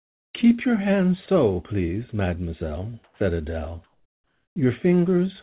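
From 0 to 0.34 s, the real background gives way to a flat, featureless hiss about 34 dB quieter. This is comfort noise in place of the background, likely synthesized by the receiver while the sender paused transmission. At 1.26 s, between "your hands" and "please mademoiselle", 20 ms of speech turns to steady noise. That is sound dropped by the voice detector, which likely mistook it for background. After "please mademoiselle", from 3.04 to 3.2 s, the same comfort noise returns, about 7 dB down. From 3.84 to 4.56 s, it returns again, about 4 dB down. Throughout, nothing is heard above 4 kHz, as expected from the G.711 call path.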